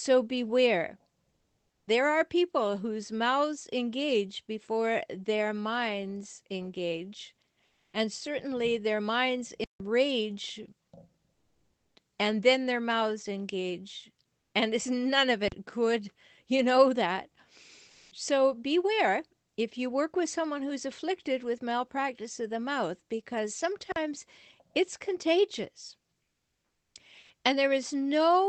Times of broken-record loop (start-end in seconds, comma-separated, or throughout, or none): none